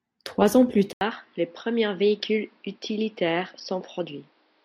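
At 0.93 s the speech drops out for about 80 ms, then returns duller and somewhat quieter through to the end, with a faint new background noise sitting well below it. This points most likely to an input switched to a poorer device mid-recording. On a spectrogram the energy above 5.7 kHz vanishes abruptly at the switch, leaving a flat ceiling. The waveform shows a brief flat gap and a smaller envelope afterwards.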